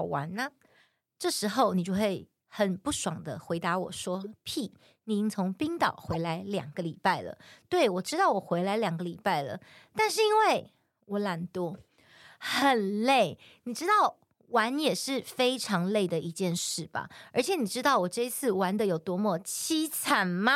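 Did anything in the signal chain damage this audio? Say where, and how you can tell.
Yes. The damage happened at the codec stage, where the decoder played corrupt frames. In this speech there are three short bursts at 4.21–4.27 s, 6.11–6.16 s and 8.06–8.10 s, each a few tens of milliseconds long. Each sounds like a chirp, squeak, blip or burst of noise. On a spectrogram each is a small block of energy at frequencies the speech around it doesn't occupy, cut off at frame edges. Their peaks rise over time, from about -30 dBFS to about -20 dBFS. This fits flipped bits making the decoder misread gains and spectral codes for a few frames.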